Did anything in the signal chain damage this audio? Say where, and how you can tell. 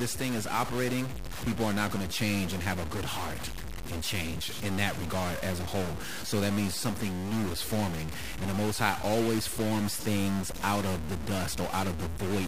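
Yes. A stuck bit is the likely cause, sitting at the converter or in the digital wiring between it and the storage stage, and it runs through the whole speech clip. A steady harsh, buzzy distortion rides on the speech, and the pauses never fall silent. They hold a noise floor at roughly -35 dBFS. That fits one fixed bit of moderate weight. About half the samples are pushed off by that bit's step in a pattern driven by the waveform, and near zero the error from the stuck bit keeps flipping with the sign of the signal.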